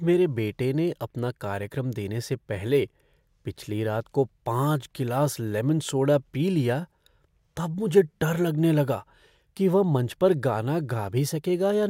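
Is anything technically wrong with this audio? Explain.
No, nothing technically wrong can be heard here.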